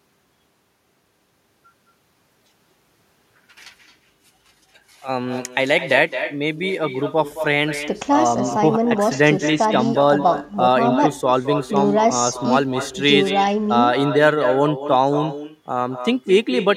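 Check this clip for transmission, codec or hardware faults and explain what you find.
The speech is affected by one fault, echo with no canceller, present throughout. The far end plays the call over a loudspeaker and its microphone feeds that sound back unremoved, so every phrase returns about a fifth of a second later, about 10 dB quieter, as a thin shadow.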